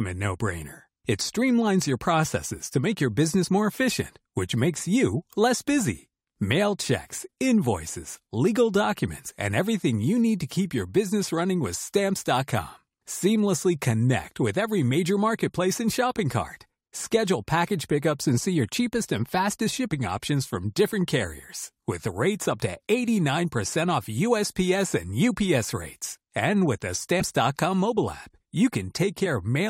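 At 9.28 to 9.30 s, after "checks invoices legal", compressed frames are skipped. About 50 ms of audio is lost. At 27.20 s, after "with the", about 70 ms more goes. Missing or rejected frames cause each jump.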